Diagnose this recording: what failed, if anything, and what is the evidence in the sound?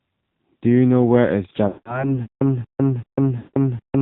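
Codec stage: the whole recording carries AMR narrowband mobile codec damage. Nothing above 4 kHz survives, and the speech has a plainly buzzy, synthetic quality from the sparse pulse excitation and the vocal-tract model. The degree of coarseness fits the low 7.4 kbps mode.

Network/radio stage: lost AMR speech frames occur at 1.68 to 2.16 s and again at 3.38 to 3.54 s. In each, the sound is smeared and drawn out, then fades toward silence. The decoder is repeating the last good pitch and spectral parameters with decaying gain, covering about 180 ms and 160 ms respectively.

Playback/buffer stage: from 2.26 s to the end there is a stutter with silent gaps. A 0.23 s burst of sound repeats every 0.38 s, separated by about 0.15 s of digital silence, and the material that should fill that time never appears. The likely cause is a stalled stream or player replaying its last fragment on each retry before running empty.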